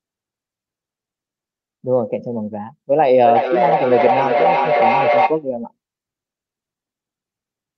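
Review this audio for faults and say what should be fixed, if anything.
From 2.99 to 5.49 s the speech is caught in a feedback echo between two devices: each phrase returns roughly every 0.4 s, thinning and ringing, with the loudest repeat at about 0 dB relative to the direct speech. A second device in the room replays the call, and this microphone picks it up again, beyond its echo canceller's reach. A spectrogram shows stacked, evenly spaced copies of each syllable with narrowing bandwidth. Prevent it by muting or removing the second device's speaker and microphone from the call.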